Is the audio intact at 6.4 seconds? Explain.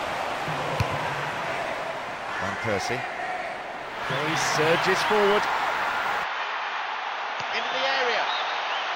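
No. At 6.24 s the sound suddenly turns duller and boxier, and it stays that way to the end of the clip at 8.95 s. Nothing above about 6.6 kHz gets through. The level drops by roughly 5 dB, and a faint new background noise appears well beneath the sound. There is no gap at the change. This points to an input switched to a poorer device, likely a narrower-band microphone or headset profile taking over mid-recording.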